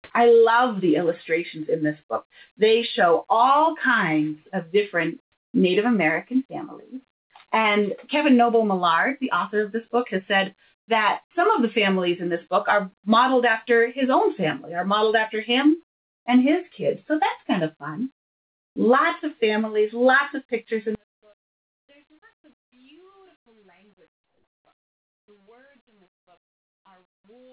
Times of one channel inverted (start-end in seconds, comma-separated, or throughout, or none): 20.95-27.52